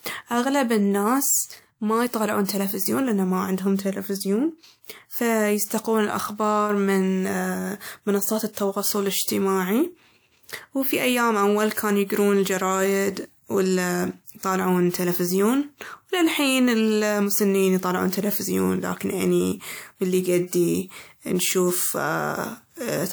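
A short hiss rises just before sharp onsets at 2.45 to 2.49 s, 8.53 to 8.57 s and 14.38 to 14.43 s, softening each attack. This is pre-echo: the codec smeared block-level quantisation noise about 40 to 49 ms ahead of each sudden loud sound.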